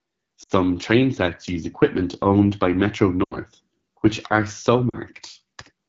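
Throughout, the speech sounds rough and raspy. That is the AMR wideband (HD Voice) codec at one of its lowest rates, which fits the 8.85 kbit/s mode. Too few bits describe the pulse excitation, and shaped noise fills the top band.

At 0.43 to 0.52 s, 3.23 to 3.38 s and 4.89 to 4.97 s, the sound drops to near silence, then returns weak and rough. These are lost AMR speech frames. The decoder repeated the last good settings with falling gain for about 60, 80 and 40 ms, which fits runs of three, four and two 20 ms frames.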